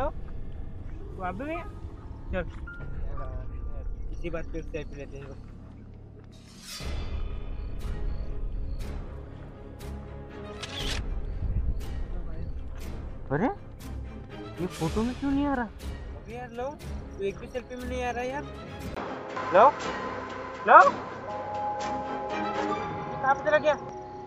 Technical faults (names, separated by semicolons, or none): input switched to a poorer device